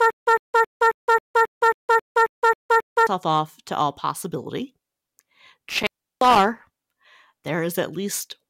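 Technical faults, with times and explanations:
0.00–3.07 s, stutter with silent gaps: The playback likely stalled and, on each retry, replayed its last fragment before running dry. A 105 ms burst of speech, already repeating when the clip opens, returns 11 times every 270 ms with 165 ms of digital silence between, and the intervening audio is lost.
5.69–6.39 s, intermittent contact: A loose cable or plug briefly opened the signal path. The speech drops out for about 346 ms with crackle at both edges where the contact breaks and remakes, and faint hiss remains while the line is open.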